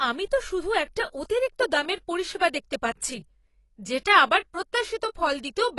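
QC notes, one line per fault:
Throughout, AAC compression: the speech sounds dull and smeared, with plainly audible codec damage. A spectrogram shows a hard ceiling with nothing above 11.4 kHz. This fits AAC-LC at around 32 kbps, the likely cause, discarding detail the encoder's hearing model judged expendable.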